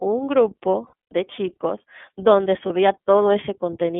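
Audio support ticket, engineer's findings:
iLBC codec, whole clip: narrowband speech, band roughly 150 Hz to 3.5 kHz, nothing above. Plainly audible roughness, slightly synthetic texture. Each 30 ms frame coded standalone; sound fits iLBC's 30 ms, 13.33 kbps mode. Probable component: VoIP codec stage.

Lost iLBC frames, 0.87–1.13 s and 2.66–2.71 s: short held, buzzy-breathy vowel-like fills. First burst scattered over 240 ms, longest run about a tenth of a second; second a single 30 ms gap. Decoder repeating last pitch cycle plus noise; speech recovers immediately after.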